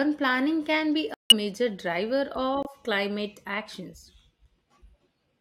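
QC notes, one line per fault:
1.14–1.33 s, corrupt frame muted: the speech drops abruptly into dead silence for about 0.19 s, then resumes on time. Bit errors in a short run of compressed frames made the decoder reject them, and the player filled several frame lengths with silence.
2.63–2.67 s, corrupt frame muted: a brief hole of about 44 ms cuts sharply into the speech with no shift in timing afterwards, which fits a single damaged frame that the decoder refused and the player replaced with silence.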